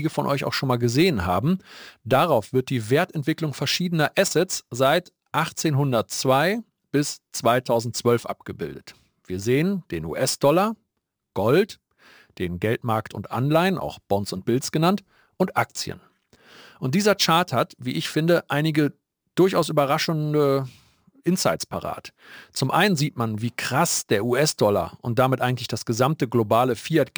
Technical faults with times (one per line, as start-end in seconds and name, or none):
0.00-27.17 crude rate conversion